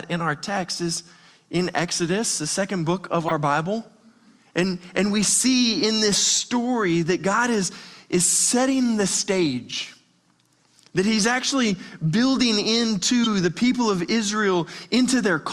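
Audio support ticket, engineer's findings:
Corrupt frame decoded, 3.26 to 3.31 s: short chirp-like burst, about 50 ms, loud, peaking near -10 dBFS. Sounds like a couple of codec frames with flipped bits. The decoder played them anyway, so misread gains put energy in the wrong bands.

Corrupt frame decoded, 13.24 to 13.27 s: same symptom, shorter blip, about 34 ms, consistent with a single damaged frame. Probable component is the decoder input path, not the source.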